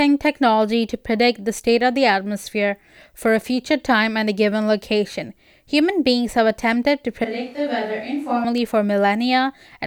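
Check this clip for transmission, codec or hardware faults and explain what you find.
There's one fault here, in the speech near the end. From 7.24 to 8.44 s it sounds like a switch to a distant microphone, likely because the close mic dropped out. The sound turns suddenly roomy and hollow, loses bass, comes in around 5 dB quieter with a more noticeable noise floor, then snaps back just as abruptly.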